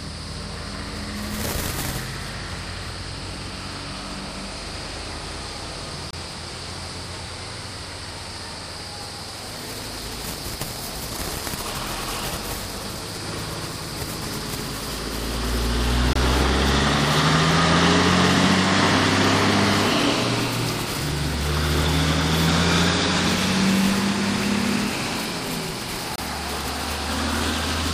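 At 6.11 to 6.13 s, 16.13 to 16.16 s and 26.16 to 26.18 s, a gap between chunks cuts in: a hard-edged 25 ms hole every 10 s where the chunk joins fall. Unlike a dropout, no sound is lost. It resumes exactly where it stopped, just delayed.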